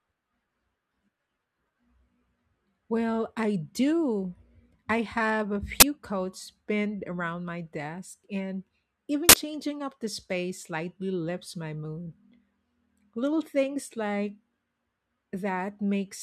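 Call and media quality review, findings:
Uninitialised buffer, 5.80–5.82 s: short, loud burst of digital noise in the speech, about 21 ms long, which fits a 1024-sample block. Playback likely read an output buffer before it was filled, so stale memory was played as samples.

Uninitialised buffer, 9.29–9.33 s: same harsh noise burst, about 42 ms, consistent with a 2048-sample block. Probable component is the playback buffer handoff, with the same unwritten-memory mechanism.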